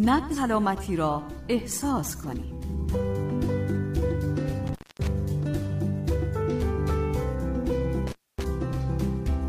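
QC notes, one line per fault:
0.33–0.38 s, damaged data in a compressed stream: a brief chirp or squawk lasting about 50 ms. Corrupted bytes made the decoder misread those frames and lose sync until it found the next frame header.
4.67–5.07 s and 8.07–8.44 s, intermittent contact: the sound cuts out for about 0.24 s and then about 0.26 s, with crackle at each edge and faint hiss while the line is open, as a loose plug briefly breaks the connection. A digital dropout would give clean silence instead.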